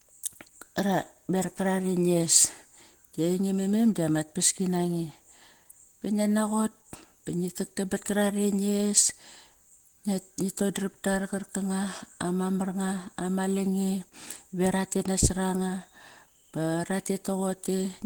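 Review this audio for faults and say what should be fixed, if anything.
Throughout the speech there is plainly audible Opus compression damage, likely from encoding at a very low rate. Rather than the watery swirl and spectral holes of MP3, the speech sounds hoarse, rough and grainy, because the encoder fills starved bands with folded or noise-like content instead of leaving gaps. The muffled hoarseness points to the hybrid speech mode at a bitrate around 16 kbps, yet content still reaches about 20.1 kHz, so this is not a narrowed-bandwidth fault. To prevent it, encode at a higher Opus bitrate.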